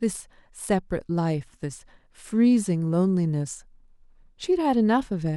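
No technical faults can be heard anywhere in the speech recording. There is nothing to mark at any point in its timeline.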